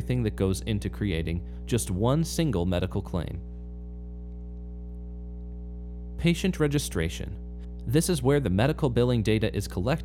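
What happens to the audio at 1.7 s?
A ground loop or nearby transformer is coupling 60 Hz power into the signal, so mains hum runs through the whole clip, including 1.7 s, as a steady tone roughly 10 dB below the speech.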